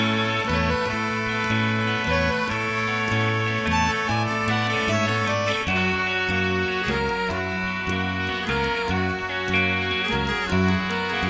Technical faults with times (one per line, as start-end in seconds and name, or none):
none